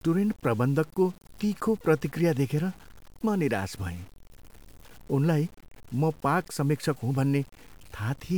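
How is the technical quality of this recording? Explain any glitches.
The technical quality is poor. Grainy distortion runs through the entire speech clip, the signature of low bit depth without dither. The likely cause is a reduction to very few bits, consistent with around 7-bit resolution, with values simply truncated to the nearest lower step and no dither added. Because the error tracks the signal, the grit swells and shifts with each syllable. Quiet tails break up or sputter between steps, and the distortion sits roughly 30 dB below the speech.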